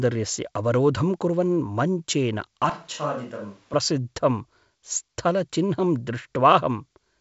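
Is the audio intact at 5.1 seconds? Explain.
Yes, at 5.1 seconds the speech is intact, carried by the G.722 wideband telephone coding path with its band limit near 7.7 kHz and no dropout, click or other fault at that moment.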